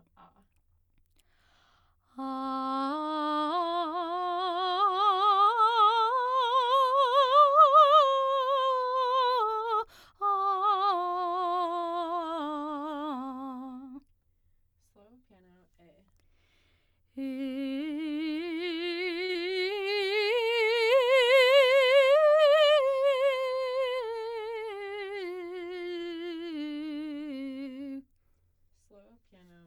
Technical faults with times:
11.79-11.85 short stall from a late packet
14.90-15.43 jitter buffer speed-up
19.25-19.31 short stall from a late packet
19.33-19.37 short concealed packet loss
24.64-25.05 jitter buffer speed-up

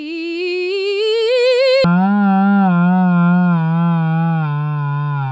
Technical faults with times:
1.84-5.32 wrong sample rate

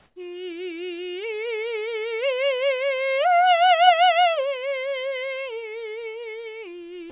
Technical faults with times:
0.00-0.16 comfort noise in place of the background

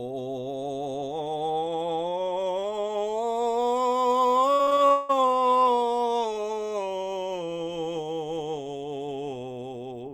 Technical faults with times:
4.55-5.11 repeated packet loss (robotic sound)

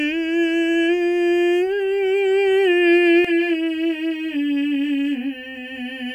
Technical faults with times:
3.25-6.15 channel delay (comb filtering)

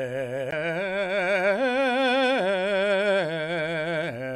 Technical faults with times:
0.51 CD skip

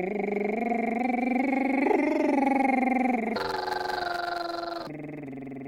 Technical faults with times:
3.36-4.88 planar audio read as interleaved

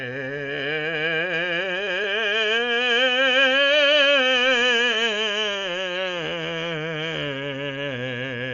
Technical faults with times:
0.00-8.54 Dolby Digital compression

